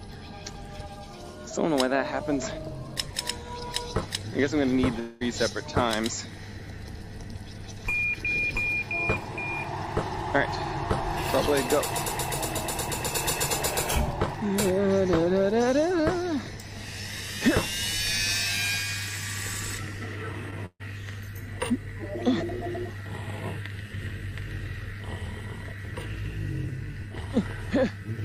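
A network-degraded audio stream with three gap-filling artefacts. From 4.99 to 5.23 s the last sound is stretched into a fading buzz or hiss that fills nearly the whole quarter-second without ever dropping to silence, and about 220 ms of real audio never returns. The cause is likely a long network dropout, where the receiver keeps extrapolating rather than muting. At 20.51 s comes a short concealed packet loss: roughly 20 ms goes missing and is covered by an 11 ms continuation that blends back in, heard as a brief smear or wobble rather than a gap. Its brevity and quick recovery set it apart from the next event. From 20.66 to 20.82 s a burst of packet loss removes about 140 ms. The continued sound is turned down as the gap goes on and falls to silence for about 60 ms before the audio resumes further along. That audible dip into silence distinguishes it from the earlier dropout.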